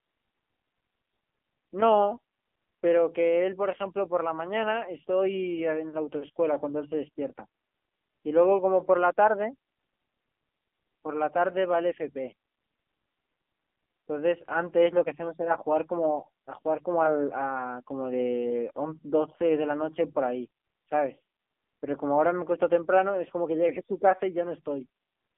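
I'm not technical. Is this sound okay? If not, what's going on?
No. An AMR narrowband mobile codec runs throughout, squeezing the speech like an old phone call: nothing above 3.4 kHz survives, leaving it muffled, buzzy and synthetic.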